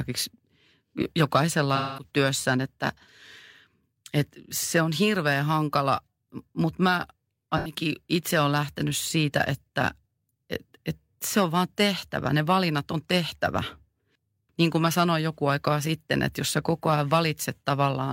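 Speech with AAC frame loss and concealment at 1.76–2.1 s, before "työssään että", and 7.57–7.76 s, after "hirveä hankala mutta mä". Missing frames are patched from earlier spectrum, leaving smeared, noisy gaps.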